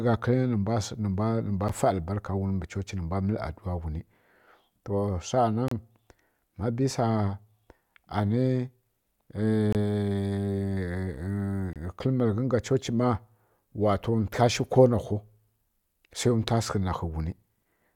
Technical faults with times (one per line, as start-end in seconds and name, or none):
1.68 gap between stream segments
5.68-5.72 gap between stream segments
9.72-9.75 gap between stream segments
11.73-11.76 gap between stream segments